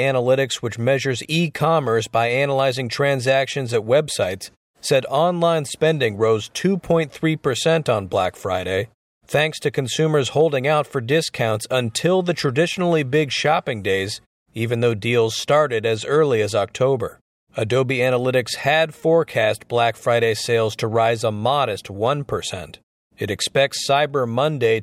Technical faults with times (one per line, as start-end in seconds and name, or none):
none